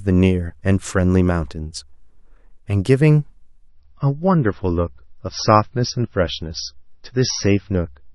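Speech that shows an adaptive stream at a lower bitrate: at 3.69 s the sound abruptly loses its treble and turns smeared and watery through to the end, with no gap at the switch. The change fits a connection slowdown forcing a step down from roughly 128 kbit/s MP3 to roughly 24 kbit/s. On a spectrogram, the energy above 5.9 kHz vanishes at that instant, leaving a hard ceiling, while the waveform continues without a break.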